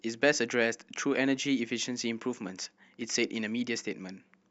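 At 0.66 s and again at 3.02 s a single sharp click cuts through the speech, likely from dropped samples: only a handful go missing, so the waveform leaps ahead. Unlike a dropout, nothing audible is removed, leaving just a thin vertical line across the spectrum.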